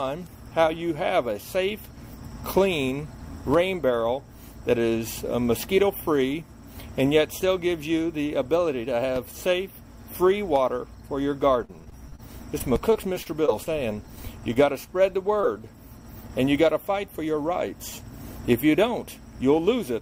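Repeated packet loss (robotic sound) runs from 11.65 to 12.20 s and again from 12.58 to 13.68 s. Packets kept failing to arrive in time, and each hole was bridged by extending the last sound before the next one came. The first stretch has five gaps, the longest 37 ms, with about a fifth of it synthetic. The second has seven shorter gaps, up to 29 ms. Both come out choppy, with slivers of audio missing.

A short stall from a late packet occurs at 14.54 to 14.57 s. A packet arrived about 18 ms late and the jitter buffer briefly ran dry. The receiver held the last sound for that 18 ms and then resumed exactly where it left off, so nothing is lost. The result is a barely stretched moment with a faint buzz or dip.

A short concealed packet loss follows at 15.41 to 15.45 s. About 20 ms of audio never reached the decoder. The receiver covered the hole by continuing the preceding sound for roughly 15 ms, then blended back into the real signal. 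It is heard as a quick smear or wobble rather than a clean gap.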